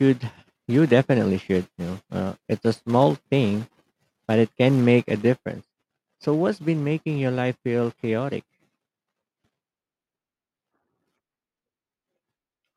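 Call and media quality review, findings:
Sudden gain jump at 5.46 s: speech and background noise both drop by about 5 dB in a single step and stay down through the end of the clip. No fade, just an instant level change. Likely cause is a gain setting or bit shift applied in the digital chain without a ramp. Since the noise floor moves with the speech, it's a plain scaling change rather than anything adaptive in the signal path.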